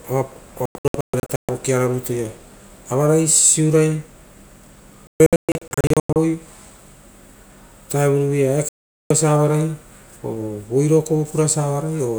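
Speech drops out three times in a digital broadcast dropout. The receiver mutes when frames fail, leaving silent holes. From 0.66 to 1.49 s and from 5.07 to 6.16 s, short gaps scatter, the longest 128 ms. From 8.69 to 9.11 s, about 0.42 s is lost outright.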